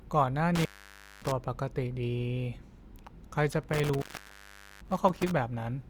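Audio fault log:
0.55–1.32 s and 3.52–5.31 s, intermittent contact: the speech drops out for about 0.57 s, then about 0.79 s, with crackle at the edges and faint hiss in between, like a loose plug briefly opening the line.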